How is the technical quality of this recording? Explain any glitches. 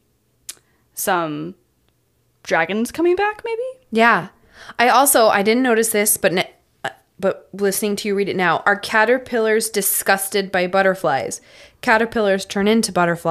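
No technical glitches are audible.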